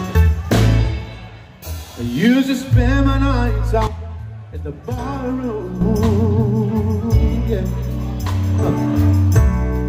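From 3.87 to 5.81 s the audio gets duller, with nothing above 13 kHz, and drops roughly 10 dB, with a faint new noise floor well under the signal and no gap at the change. That's likely the input switched to a poorer device, then back.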